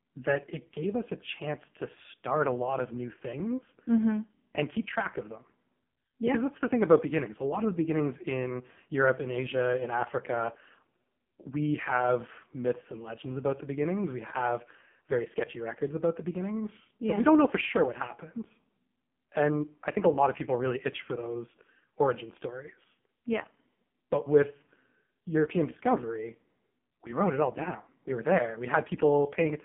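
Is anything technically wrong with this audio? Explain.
Yes. The whole clip has passed through an AMR narrowband mobile codec. The speech is rebuilt from a coarse vocal-tract model driven by sparse pulses, so it sounds heavily buzzy and synthetic, which fits a bitrate of about 5 kbps. On a spectrogram the energy sits in a band from about 150 Hz to 3.4 kHz and is empty above 3.5 kHz.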